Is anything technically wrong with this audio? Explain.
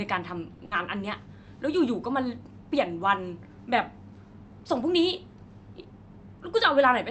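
Yes, two brief packet-delivery faults occur close together near the start of this speech, which travels over a call path whose codec limits the audio to about 8 kHz.

A short stall from a late packet occurs from 0.53 to 0.61 s. A packet arrived late, the jitter buffer drained, and the receiver held the last sound for about 60 ms while it waited, then resumed exactly where it left off. Nothing is lost, but the sound is drawn out unnaturally, with a faint buzzy or dipping quality, and playback runs about 60 ms later from then on.

A burst of packet loss follows from 0.65 to 0.73 s. This time the missing audio never arrived in time to be played, so the receiver extended the preceding sound and let it fade, filling about 60 ms. When playback picks up again it has skipped forward, leaving out about 60 ms of speech. The result is a held buzz or fading hiss followed by an abrupt jump.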